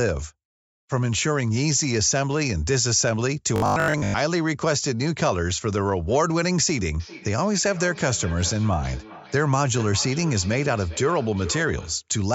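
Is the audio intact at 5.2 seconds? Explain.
Yes, the speech at 5.2 seconds is intact, with only the ordinary call microphone processing in the path, which trims the lowest bass.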